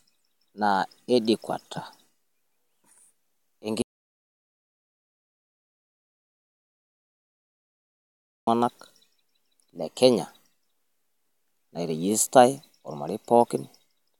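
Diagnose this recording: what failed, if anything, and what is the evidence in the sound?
Audio dropout to silence: the speech cuts at 3.82 s into dead silence with no room tone until 8.47 s, likely a lost input link writing zeros.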